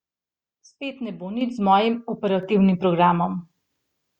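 At 1.41 s and again at 2.43 s the microphone volume stepped up, jumping about 9 dB then about 4 dB, as the input gain got raised, lifting speech and background together.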